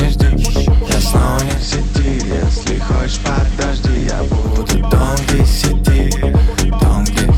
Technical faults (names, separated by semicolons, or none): mains hum; digital radio blending to analogue